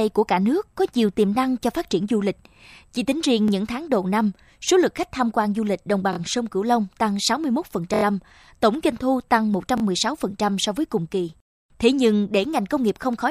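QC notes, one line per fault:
3.48 s, 6.13–6.18 s, 7.94–8.03 s, 9.78–9.82 s: repeated buffer. A 23 ms block replays one, two, four and two extra times when new audio arrives late, which fits a 1024-sample buffer. Each hard-joined repeat gives a brief stutter or buzz. Essentially nothing is skipped.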